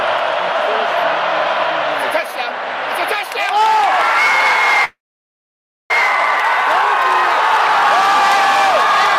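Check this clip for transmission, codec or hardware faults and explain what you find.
A call audio freeze runs from 4.84 to 5.91 s. The sound stops moving forward and the last moment is stretched into a brief fading tail, then about 0.94 s of silence. The likely cause is packets held up in transit until the jitter buffer ran dry, with the receiver filling the wait. When delivery resumed, the audio picked up exactly where it had stopped, so nothing is lost, but everything after it arrives about 1.06 s later.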